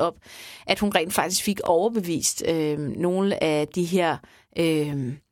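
At 1.66 to 1.68 s and again at 3.68 to 3.70 s, the speech has overlapping chunks: consecutive 2-second blocks overlap, so 20 ms replays at each join and a small stutter-click results. A waveform shows a repeated fragment, a spectrogram a thin vertical seam.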